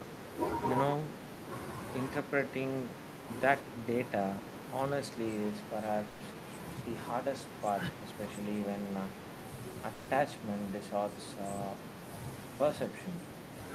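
At 6.07 s the speech stalls and a smeared buzz stretches the last sound for about 130 ms before fading. This is a call audio freeze. Packets were likely delayed and the jitter buffer ran dry. The speech then resumes where it stopped, so nothing is lost, but everything after it runs later. At 9.94 s the same thing happens again, with about 140 ms of fill before the speech picks up at 10.11 s.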